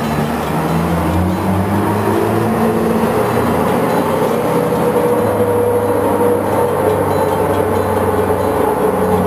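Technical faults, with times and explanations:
Throughout, imaging from sample-and-hold upsampling: unsmoothed 22 to 44.1 kHz conversion mirrors the spectrum into 11–22 kHz, about 28 dB down. Unlike hiss, this fizz follows the level and moves against pitch.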